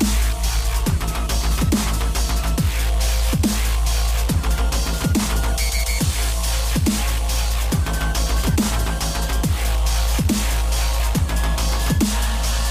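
No faults are audible anywhere in the recording, so there is nothing to flag.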